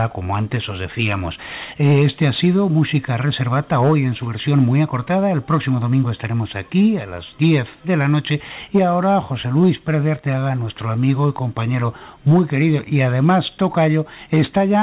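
No technical faults can be heard, and the audio carries the bandwidth of a call path, with nothing above 4 kHz, which fits a narrowband telephone codec such as G.711 A-law.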